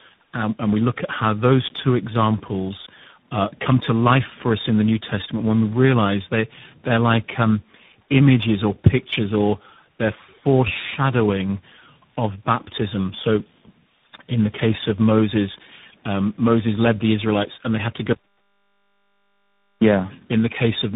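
Throughout, tandem speech coding is audible: the speech passed through several narrowband codecs in sequence, leaving it rough, muffled and warbly, with nothing above 3.8 kHz. From 18.13 to 19.82 s, just after "and they had to", an audio dropout to silence leaves 1.69 s of silence, likely from a lost input or link.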